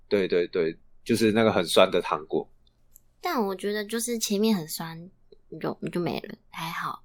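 No technical faults can be heard anywhere in this speech recording.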